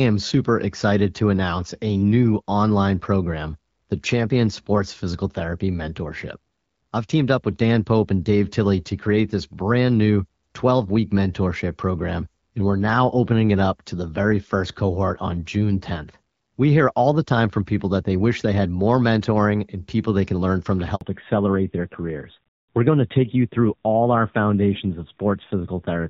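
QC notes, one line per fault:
20.95–21.01 s, handover gap: right after "can learn from to", the speech fades out within a few tens of milliseconds and is replaced by 60 ms of silence, because the call was switching networks and no speech frames arrived until the new link took over. Whatever was said in that moment is simply gone. On a waveform this is a short flat-line notch cutting into the speech. On a spectrogram it shows as a thin vertical blank stripe across every frequency.
21.01 s to the end, fallback to narrowband: immediately after the gap, the call drops from the lightly coded HD Voice heard before it to an older narrowband codec, and nothing above 4 kHz survives. The speech becomes duller and rougher, with sibilants losing their crispness, which fits a low narrowband rate of about 7.4 kbit/s. A spectrogram shows a hard ceiling at 4 kHz from this point on, sharply lower than the energy reaching toward 7 kHz earlier in the clip. 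The waveform looks slightly smoother, with less fine high-frequency detail.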